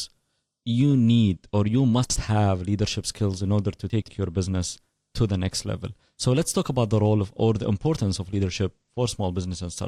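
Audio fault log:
2.04 to 2.16 s, chunks out of order: right after "you need or you" a 60 ms slice of the speech plays one chunk late, swapped with the one after it, so the syllables briefly jumble before "have leadership skills in". Nothing's missing, but there are three hard joins.
3.90 to 4.08 s, chunks out of order: same thing after "skills in order to", but this chunk lands two slots late, so the scramble runs longer before "your business to the".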